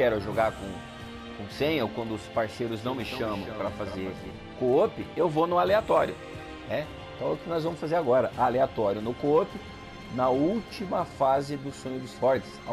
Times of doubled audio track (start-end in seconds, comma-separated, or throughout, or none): 2.75-4.31